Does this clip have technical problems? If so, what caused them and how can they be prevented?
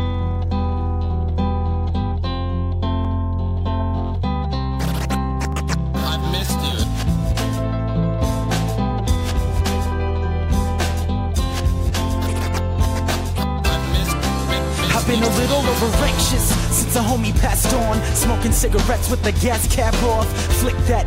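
Yes. Two sharp clicks sit at 3.05 s and 5.52 s. They are most likely dropped samples: a fraction of a millisecond of the stream went missing, so the waveform leaps from one value to a later one with nothing lost to the ear except that step. On a spectrogram each shows as a thin vertical line running through all frequencies, and the waveform shows a small abrupt discontinuity. Keeping capture and processing buffers large enough that the audio thread never underruns prevents this.

A brief chirp runs from 11.34 to 11.37 s and a shorter blip comes at 19.05 s. Each is a corrupt frame decoded: damaged bits in a compressed frame were played anyway, so misread gains and codes pushed energy to the wrong frequencies. The first spans about one frame's length and the second sounds like it touched a couple of frames. Both peak at about -25 dBFS. A spectrogram shows a short misplaced patch or smear that doesn't match the surrounding content, and the waveform shows a brief burst of unrelated energy. 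Protecting the compressed stream with checksums and concealing or discarding frames that fail them prevents this.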